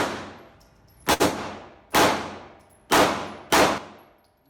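At 1.13 s a packet arrived late and the jitter buffer ran dry, so the receiver held the last sound for about 65 ms before resuming at the same point. Nothing is lost, but the sound hangs unnaturally to 1.22 s, with a slight buzz or dip, and everything after it plays 65 ms later.

At 3.78 s comes a sudden gain jump, likely a digital gain setting applied without a ramp. The level drops by about 8 dB from one sample to the next, and the sound and background noise fall together and stay lower to the end.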